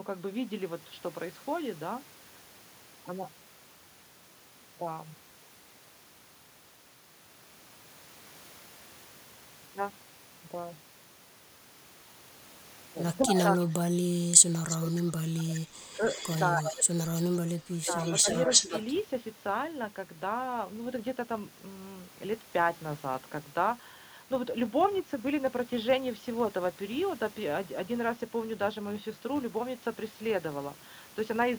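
From 13.29 to 16.02 s, speech suppressed in double talk sets in: with both sides likely talking at once, the echo canceller ducks the talker, pulling the voice down as far as about 30 dB for roughly a second in total. Inside that stretch, from 13.36 to 13.63 s, an echo leak likely escapes a far-end loudspeaker path, returning the voice 304 ms late at only a few dB below the direct speech. A longer echo leak follows from 14.69 to 18.93 s, this time delayed 317 ms and again nearly as loud as the speech. During it, speech suppressed in double talk recurs from 16.58 to 16.87 s and from 17.78 to 18.49 s, likely the canceller clamping again, with shallower dips of about 15 dB.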